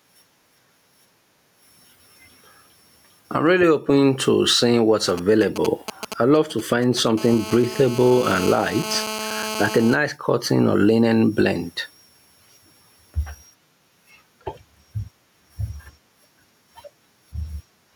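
Gain pumping runs through the whole speech clip, with a gain swing of around 15 dB, so quiet and loud passages sit unnaturally close in level and the delivery sounds squashed. The likely cause is input gain set far too high for the microphone, with a fast limiter or compressor clamping down on each peak and releasing in the gaps.

From 5.09 s to 7.08 s, just after "open to seeing what's", GSM signalling bursts break through. They come as a galloping dit-dit-dit of brief buzzes at about 217 Hz, roughly 20 dB below the speech. A nearby 2G phone is exchanging short groups of radio bursts with the network, as it does before a call or message lands. The audio circuitry rectifies those pulses and passes the resulting buzzes along with the speech.

From 7.18 s to 9.96 s, ending just before "cotton or linen blend", the pattern becomes continuous GSM phone buzz. This is a hard, raspy tone at 217 Hz, rich in harmonics, about 19 dB below the speech and unrelated to it. 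Here the phone is in a call and transmitting 217 bursts a second without a break, and the circuit demodulates that radio pulse train into an audible buzz that holds steady for nearly three seconds.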